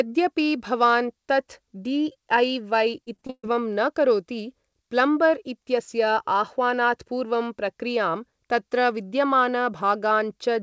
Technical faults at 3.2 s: repeated packet loss (robotic sound)

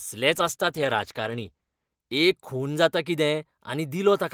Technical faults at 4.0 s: none

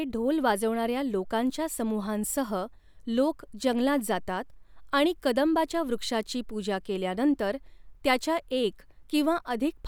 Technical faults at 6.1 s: none

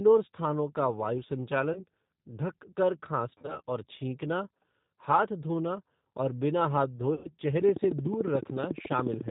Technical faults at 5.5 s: G.729 codec

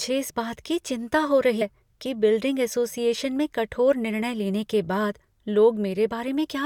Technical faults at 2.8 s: none

